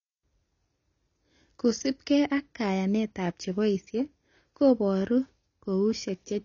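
A speech recording that was likely squeezed through AAC compression at a low bitrate, one that fits something around 24 kbps AAC-LC, for its whole length. To save bits, the encoder has discarded everything above 7.1 kHz and quantised the remaining bands coarsely, so the speech sounds dull and muffled. Sibilants lose their crispness and take on a smeared, fizzy texture, and sustained sounds carry a warble as the coded spectrum shifts from frame to frame.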